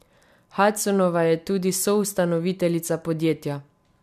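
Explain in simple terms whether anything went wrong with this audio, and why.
Nothing went wrong with this speech recording. Listening through it, no technical problem can be heard at any point.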